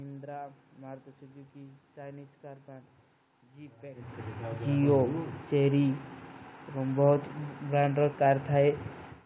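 Speech recorded through a call path, with no technical faults to be heard. The audio stops at about 4 kHz, which fits a narrowband telephone codec such as G.711 A-law, and the room's background noise sits underneath throughout.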